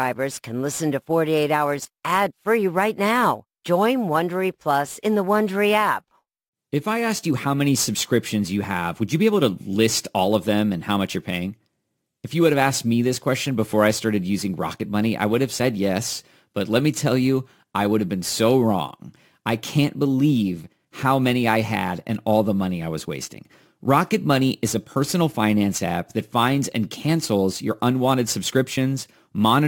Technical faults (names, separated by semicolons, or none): crude rate conversion